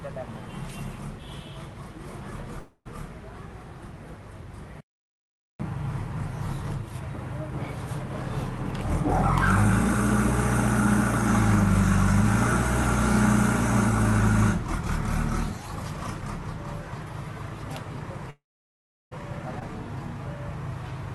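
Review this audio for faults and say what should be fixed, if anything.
Call audio freeze at 2.59–2.87 s and 18.30–19.13 s. The sound stretches into a fading buzz or hiss, then silence, about 50 ms and 720 ms. Packets were likely held up, emptying the jitter buffer. Nothing is lost, but gaps are inserted.

Skip ahead at 19.59–19.63 s. Roughly 0.7 s of audio is dropped. Playback jumps forward almost directly, bridged by a 17 ms fill, as audio was dropped on the way or by an overflowing jitter buffer.

To prevent both, use a larger, adaptive jitter buffer that catches up gradually instead of dropping audio.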